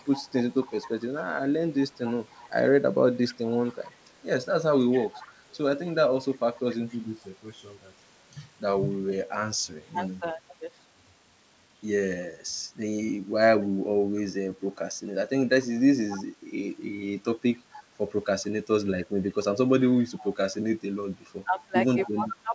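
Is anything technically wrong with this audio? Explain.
Yes, two kinds of fault are audible.

Echo leak: from 0.0 to 3.97 s, 4.91 to 6.98 s, 16.09 to 16.24 s, 17.72 to 17.83 s, 19.43 to 20.33 s and 22.04 to 22.1 s, a faint copy of the speech trails the original by 261 ms. It sits about 20 dB down, and about 15 dB down at 16.09 s. The likely cause is a loudspeaker whose output the far end's echo canceller failed to remove. The fixed 261 ms lag tells it apart from room reverberation, which smears into a diffuse tail.

Speech suppressed in double talk: from 9.95 to 10.41 s the speech dips by up to about 10 dB, in pieces adding up to roughly a tenth of a second. From 21.45 s to the end it sinks by up to about 20 dB. Both sides talking at once likely left the canceller unable to separate the talker from the echo, so it turned everything down. The level ducks rather than dropping to silence with codec glitches, which separates it from packet loss.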